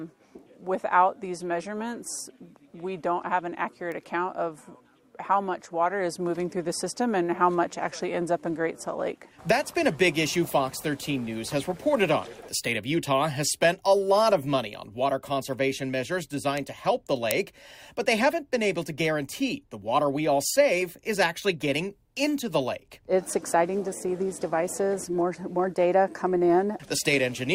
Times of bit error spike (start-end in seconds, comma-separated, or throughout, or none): 3.92, 16.57, 17.31, 20.82